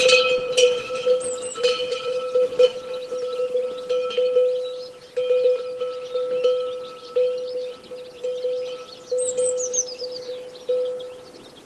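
No technical faults can be heard in this audio, which comes through a call codec path whose coding leaves the high end rolling off around 12 kHz.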